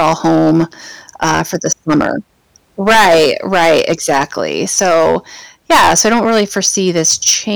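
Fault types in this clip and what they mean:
Hard clipping: the speech is driven about 17 dB past what a stage in the chain can pass, so its peaks are sliced flat, roughly 7 percent of samples in all. The flat tops add high harmonics, heard as a harsh fuzz on every loud syllable throughout.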